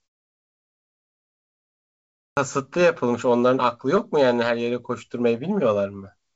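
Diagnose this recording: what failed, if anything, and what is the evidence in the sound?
At 2.30 s the speech bursts out of silence with its first sound missing, so the onset lands hard instead of building up. This is a clipped start after a pause, a playback-stage fault: after about 2.3 s of quiet the output device had dropped into a low-power state, and it took roughly 0.07 s to wake and lock again before it passed sound. The first stretch of that phrase was simply never played.

Between 2.78 s and 4.00 s there are scattered short gaps, around seven brief ticks and smeared hiccups with the speech still clear between them. The cause is the network stage: individual packets arrived late or not at all, and the receiver's concealment filled each hole by extending the preceding sound. Each patch lasts about 10 ms at most, about 70 ms in total, roughly 5 percent of that span. The G.722 call path's 8 kHz top end is audible throughout these repairs.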